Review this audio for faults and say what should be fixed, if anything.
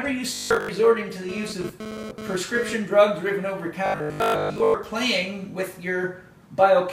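From 0.35 to 0.69 s and again from 3.86 to 4.74 s there is robotic sound from repeated short buffers: a rigid 50 Hz metallic buzz, likely from a 20 ms block being replayed while most of the real audio is dropped. A spectrogram shows evenly spaced 50 Hz harmonic lines, and the waveform shows identical repeating cycles. Fix the underrun with a larger jitter buffer or more processing headroom.

From 1.29 to 2.74 s there is GSM phone buzz, a raspy 217 Hz drone about 10 dB below the signal that cuts in and out as a nearby phone sends data in bursts. A spectrogram shows a stack of harmonics on a 217 Hz spacing in broken stretches, and the waveform shows sharp periodic spikes. Keep phones away from the recording chain or put them in airplane mode.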